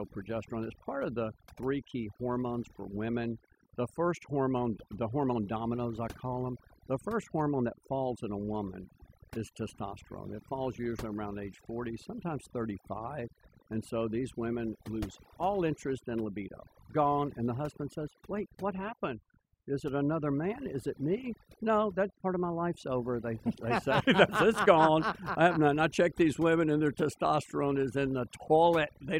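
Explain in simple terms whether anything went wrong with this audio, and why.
Yes, something went wrong: overdone noise removal runs through the whole speech clip. A noise reduction tool set too strong shut off frequency bands it took for background noise. The quiet parts of the voice went with them, so the background drops and breaks up into twinkling specks.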